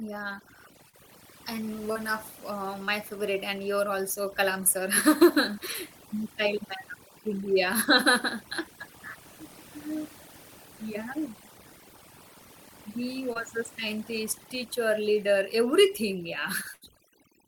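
Throughout the speech, overdone noise removal leaves the background lowered and flecked with twinkling specks. Unlike the brief dropouts, this never comes and goes: bands are pulled down whenever they fall near the estimated noise floor, and soft parts of the voice vanish with them.

Short concealed packet loss occurs at 0.89–0.95 s, 1.93–1.97 s, 2.85–2.89 s (just before "favorite and you're also") and 13.33–13.37 s. Each leaves a hole of about 20 to 40 ms, bridged by continuing the previous sound, so it registers as a quick smear or wobble rather than a gap.

A burst of packet loss follows at 16.73–16.83 s, right after "scientist teacher leader everything". About 80 ms is missing, filled by prolonging and fading the last sound. It is longer than the earlier events, so instead of a wobble it is a held, decaying tail before the audio resumes.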